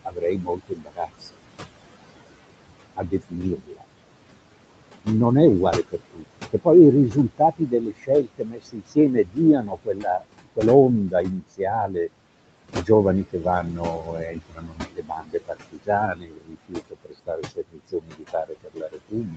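From the start, the room noise, sitting about 13 dB below the speech, sinks away in the gaps and swells back under each phrase. These are noise suppressor artifacts: the suppressor judges, frame by frame, which bands hold steady noise and pulls them down by about 21 dB. That pumping residue is what remains between and beneath the speech.

The same processing also eats into the speech itself. Soft consonants, word endings and quieter stretches come out swallowed or faint at 0.05 to 1.38 s, 2.96 to 3.85 s, 5.73 to 6.67 s, 7.1 to 10.58 s, 11.08 to 11.96 s, 12.72 to 12.89 s, and from 13.32 s through to the end. This is speech cut by the noise suppressor, which mistakes low-level speech energy for background and turns it down by about 16 to 22 dB. One hit falls around 7.1 to 10.58 s, where roughly two seconds of speech are dulled in pieces.

At 13.51 to 13.53 s a brief grainy, noisier patch passes with no gap or click. 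A lost packet was rebuilt from error correction: one 20 ms Opus frame went missing, and the decoder played the lower-quality copy carried in the next packet, so the audio stays continuous but that instant sounds rougher.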